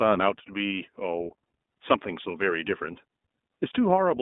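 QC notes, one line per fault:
Throughout, iLBC codec: the speech is coded in 20 ms frames, each frame's excitation coded on its own, on a line passing only 200 Hz to 3.6 kHz, which fits the 15.2 kbps mode. The result is dull, thin speech with a plainly rough, synthetic edge.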